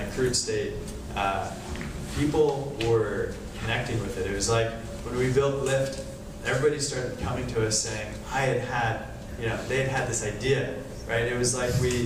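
No technical faults can be heard anywhere in this recording.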